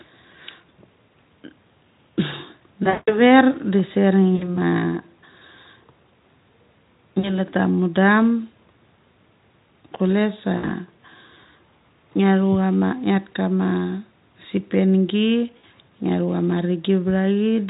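VoIP packet loss concealed by the speech codec hits at 2.84 to 3.21 s, with about 200 ms of packets missing over 240 ms, then briefly at 4.35, 7.19, 10.57 and 15.58 s. Unlike a plain dropout to silence, the decoder stretches the last sound into a fading buzz or coloured noise that stays weak until it recovers, over the faint Speex colouring.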